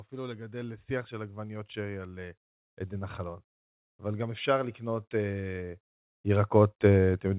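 From 0.09 s to the end, automatic gain rising lifts speech and background noise together in a slow, steady swell, unlike a compressor's level-dependent pumping.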